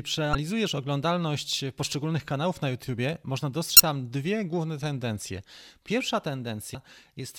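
Three brief glitches break into the speech, at 0.32 to 0.35 s, 3.76 to 3.80 s and 6.72 to 6.75 s, each lasting only a few hundredths of a second. These are damaged data in a compressed stream. A small stretch of the encoded bytes is corrupted at each point, so the decoder misreads those frames, loses its place, and produces a chirp, click or short hole before it locks back onto a valid frame.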